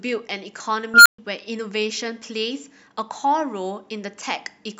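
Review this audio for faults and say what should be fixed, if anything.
An unstable filter: between 0.94 and 1.18 s a recursive filter's feedback ran away, so a tone at roughly 1.5 kHz swells over 0.12 s into a loud squeal, clips, then overflows and cuts the speech to silence for 0.13 s. Validating coefficients so every pole stays inside the unit circle, and resetting filter state on overflow, would prevent it.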